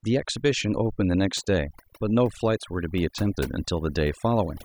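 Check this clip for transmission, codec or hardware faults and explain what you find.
Speech over a background scrubbed to near silence, broken up into twinkling, warbling specks, runs through the whole clip. This is overdone noise removal: the reduction was set so hard that frequency bands near the noise estimate are cut off, taking the quieter parts of the voice with them.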